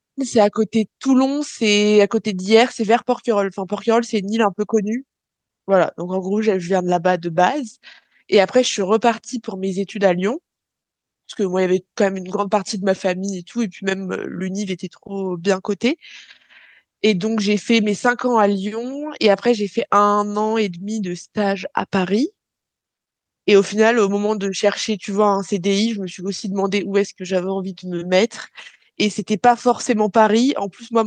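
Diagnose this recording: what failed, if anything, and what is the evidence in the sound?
Nothing failed in this recording.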